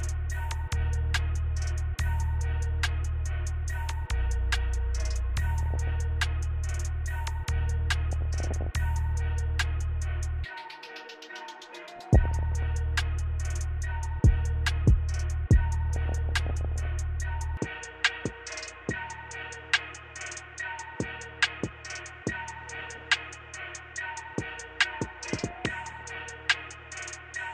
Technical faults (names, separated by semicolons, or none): DAB burbling; input switched to a poorer device